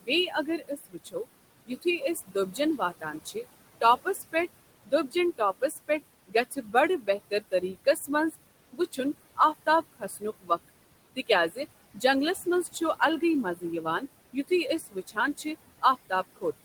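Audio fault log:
Throughout: noise suppressor artifacts. The suppressor pulls the bands it judges to be steady noise down by about 20 dB frame by frame, so the background drops away between phrases and comes back under the speech.
0.01 to 16.44 s: speech cut by the noise suppressor. Across this span the suppressor mistakes parts of the speech for noise and lowers them by up to about 20 dB, roughly four seconds in all, so soft consonants and word endings come out swallowed or faint.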